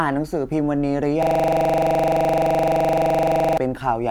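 At 1.23 s the speech locks into a system hang loop that runs until 3.58 s. The machine or its audio driver stalled, but the sound hardware kept replaying the same ring buffer, so one 42.67 ms slice repeats exactly, around 55 times. That loop length fits a 2048-sample buffer. Cycling at 23.4 Hz, it lands between a buzz and a stutter: a rapid machine-gun rattle.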